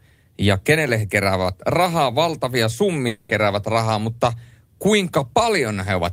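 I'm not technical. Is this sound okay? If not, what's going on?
No. At about 3.07 seconds the speech breaks off for roughly a quarter of a second, until about 3.31 seconds. In that gap the last sound is stretched into a fading buzz or hiss, and then the voice returns with a short piece gone for good. This is most likely a long network dropout: the audio stopped arriving for a moment, so the receiving end filled the hole with a continuation of the last sound, and the missing part was never played.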